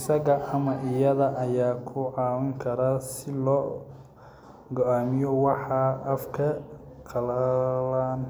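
Nothing stood out on listening to the speech in this recording.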